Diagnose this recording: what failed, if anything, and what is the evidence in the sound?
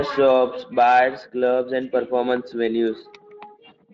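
Nothing here has failed: the speech comes through steady and intact, with no dropouts, clicks, distortion or timing trouble anywhere in the recording.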